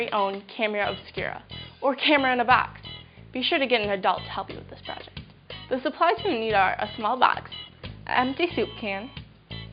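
No technical faults are audible.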